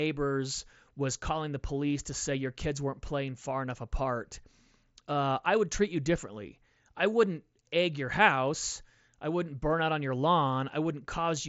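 No technical faults can be heard in this speech clip. It carries the character of a Bluetooth mSBC headset link, with the band stopping at about 7.7 kHz and a light graininess from the codec.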